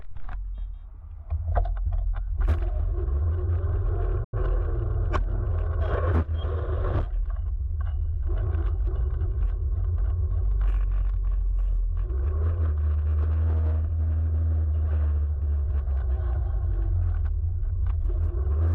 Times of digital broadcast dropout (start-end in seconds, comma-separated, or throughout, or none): 4.24-4.37